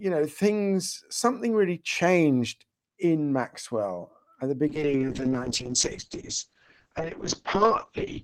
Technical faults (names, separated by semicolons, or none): call bitrate drop